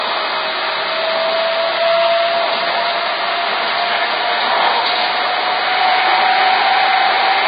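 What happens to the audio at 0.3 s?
At 0.3 s you're hearing the same thing that runs through the whole clip: low-bitrate audio saved at a high bitrate. Nothing comes through above about 4.9 kHz, so these sounds come across dull. It's likely an earlier very low-bitrate encode, which fits something around 18 kbit/s, later re-saved as a roomy MP3. The bigger file can't bring back the top end the first pass threw away.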